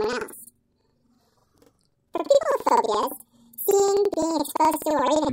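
Planar audio read as interleaved runs throughout the clip. Blocks of roughly 85 ms, which fits a 4096-sample block, are read as alternating pairs, so each plays twice at double speed, left then right. The sound is an octave high, with a flutter at about 11.7 Hz.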